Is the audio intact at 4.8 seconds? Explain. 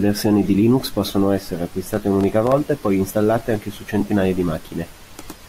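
Yes, the speech at 4.8 seconds is intact, with no dropout, click, distortion or other fault at that moment.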